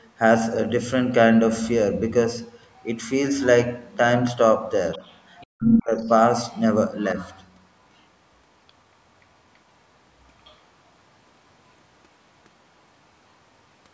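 At 2.48 to 2.98 s, a faint second voice sits under the speech, roughly 35 dB down. This is the other side's voice leaking through, likely because the loudspeaker playing the far end was picked up by the microphone and the echo canceller left a residue. It recurs at 4.92 to 5.47 s and 7.19 to 7.44 s, louder at around 25 dB below the speech. It also comes back at 5.97 to 6.10 s, 6.52 to 6.56 s and 10.44 to 10.56 s as brief scraps about 35 to 40 dB down.

From 5.52 to 6.05 s, the main speech itself sinks by as much as 40 dB for about half a second. This is speech suppressed in double talk. With both sides talking at once, the echo canceller likely could not separate the local talker from the loudspeaker echo and turned everything down. The audio stays band-limited with nothing above 8 kHz, which matches ordinary call microphone processing.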